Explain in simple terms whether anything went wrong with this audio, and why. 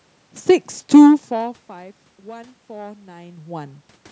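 Nothing went wrong that I could hear: the voice getting quieter or louder around 1 s and again around 3 s just sounds like the talker moving relative to the microphone, and the background noise is simply the room they were in.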